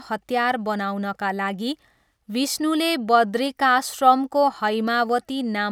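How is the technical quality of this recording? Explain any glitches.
No glitches or technical faults are audible anywhere in the speech recording.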